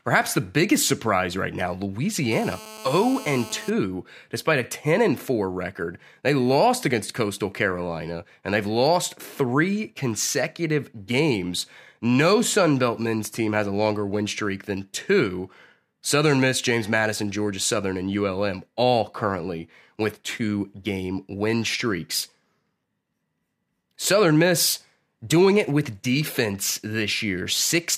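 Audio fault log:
2.32–3.70 s, GSM phone buzz: a harsh, raspy 217 Hz rasp, about 16 dB under the speech, from a nearby phone on a call whose transmit bursts the audio circuit rectifies, ending just before "despite a".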